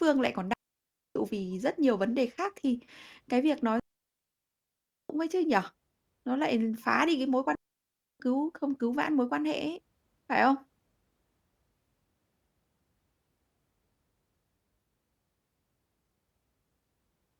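Speech with three digital wireless dropouts, at 0.53 to 1.16 s, 3.80 to 5.10 s and 7.55 to 8.20 s, lasting about 0.6 s, 1.3 s and 0.6 s. Each time, the receiver lost too much of the link's data and muted with a quick fade, leaving clean near-silent gaps with no noise bursts around them.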